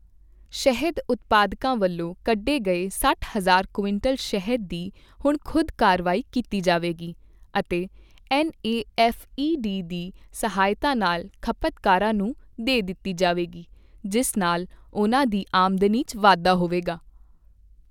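No technical faults can be heard in the speech recording. Nothing at any point in it calls for comment.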